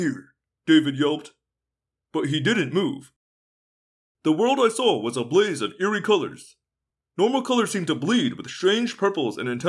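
Nothing in this speech recording stands out as a technical fault, so there's nothing here to flag.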